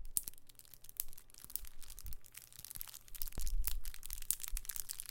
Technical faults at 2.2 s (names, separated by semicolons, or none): audio read two samples at a time (double speed)